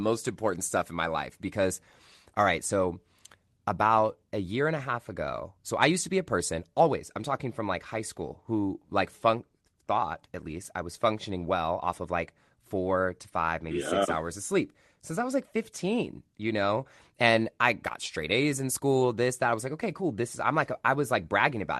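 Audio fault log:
No audible faults detected.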